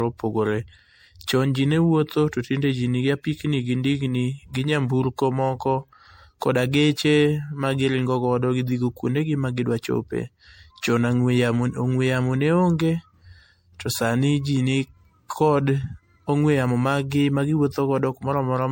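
From start to finish the speech carries a swirly, hollow smear, attacks blur, and nothing sounds above 16.6 kHz. That points to MP3 at around 64 kbit/s, but the artefacts are heavier than a single encode at that rate would leave. The likely cause is generation loss from encoding the audio around five times, each pass requantising on a shifted frame grid so the noise and spectral holes pile up.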